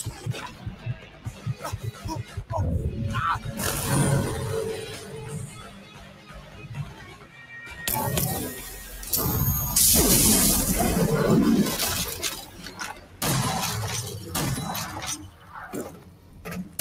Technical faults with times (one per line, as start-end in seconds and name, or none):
0.00-16.81 noise suppressor applied to music or sounds
0.10-1.63 sound cut by the noise suppressor
2.23-2.44 sound cut by the noise suppressor
4.95-7.51 sound cut by the noise suppressor
12.42-13.21 sound cut by the noise suppressor
15.18-15.55 sound cut by the noise suppressor
15.87-16.81 sound cut by the noise suppressor